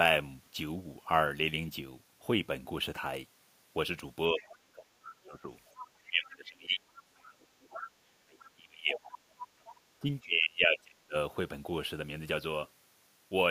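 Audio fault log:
4.3 to 11.15 s, speech suppressed in double talk: the talker's speech is pulled down during 4.3–5.49 s, 6.08–9.19 s and 10.0–11.15 s, dipping by about 20 dB in the first stretch and about 30 dB in the later two. The likely cause is an echo canceller that, with both sides talking at once, could not separate the near voice from loudspeaker echo and attenuated both.
4.37 to 9.75 s, other side's voice leaking through: a second voice comes through faintly at 4.37–4.58, 5.74–6.08, 6.97–7.03, 8.39–8.49 and 9.4–9.75 s. It sits from about 15 dB below the speech, in the 5.74 s and 9.4 s fragments, down to about 30 dB below it, at 8.39 s. It is heard as short scraps rather than continuous talk. This is likely residual loudspeaker echo that the canceller failed to remove from the microphone signal.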